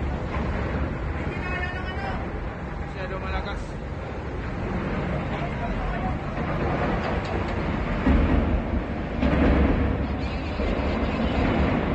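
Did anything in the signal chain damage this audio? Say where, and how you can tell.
Yes. A doubled audio track starts abruptly at 6.56 s and runs to the end, most likely from the same signal being captured again through a slower second path. A clean, full-band copy trails about a fifth of a second behind, roughly 5 dB quieter, with no decay or room colour.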